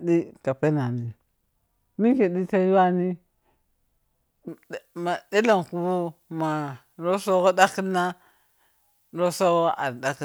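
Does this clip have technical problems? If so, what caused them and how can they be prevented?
Yes. From 4.48 s to the end at 10.25 s, the speech turns thin, bright and hissy on sibilants because pre-emphasis was left on: the treble lift applied for recording or transmission was never undone by the matching de-emphasis, leaving 10 kHz about 11 dB above 1 kHz, which fits a J.17-style curve. Unlike a high-pass filter, which strips bass, the low end here stays intact and only the upper range rises progressively. Preventing it means making sure every pre-emphasised link has de-emphasis switched on at the receiving end.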